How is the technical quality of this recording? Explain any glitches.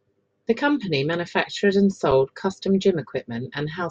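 The recording has one glitch, a brief dropout in the speech.

Underrun with held sample, at 2.11 s, between "company manufactured and" and "custom gym": the output buffer briefly ran dry, so the converter froze on its last value for about 5.3 ms, or 256 samples. The waveform goes flat and the sound cuts out with little or no click. Since essentially nothing was lost, playback picks up where it stopped and the return is soft.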